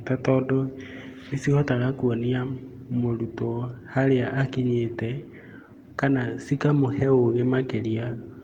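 No technical faults can be heard anywhere in the speech. The Opus voice compression works in its hybrid fullband mode, leaving only light coding traces and keeping content up to about 20.2 kHz, which fits a bitrate of around 24 kbps.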